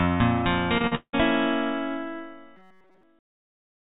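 Repeated packet loss (robotic sound) runs from 0.78 to 1.15 s. Packets went missing or arrived late in quick succession, leaving four holes in the stream. Each hole was bridged by stretching the last received sound, and the next one followed before the audio could recover. About two thirds of this stretch is concealment rather than real signal, and the longest hole lasts 179 ms. The result is choppy sound with pieces dropped out.

Robotic sound from repeated short buffers follows from 2.56 to 3.03 s. Over most of this stretch, the audio is replaced by rapid repeats of one tiny chunk, which imposes a rigid buzz at 188 Hz. That pitch corresponds to a repeat period of about 5.3 ms, so the likely cause is fresh audio arriving too seldom and a very short buffer being replayed to fill the wait. The sound loosely keeps its shape but takes on a flat, mechanical drone. Throughout, nothing is heard above 4 kHz, consistent with the band limit of the G.711 mu-law call codec carrying the audio.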